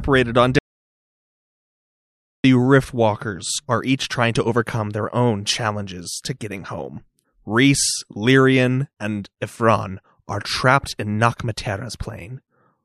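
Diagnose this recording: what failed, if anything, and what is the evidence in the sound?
At 0.59 s the speech stops abruptly and the track falls to silence, with no room tone or noise floor, until it resumes mid-flow at 2.44 s. About 1.85 s of speech is simply missing. This is an audio dropout to silence, most likely at the input stage: a momentary disconnection, failed link or accidental mute cut the signal while the recorder kept writing silence, so nothing from that stretch survives.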